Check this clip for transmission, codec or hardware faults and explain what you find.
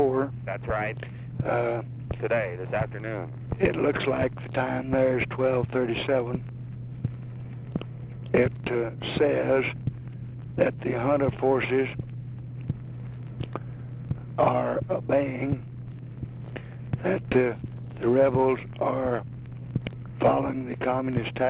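Nothing faulty can be heard anywhere in this clip.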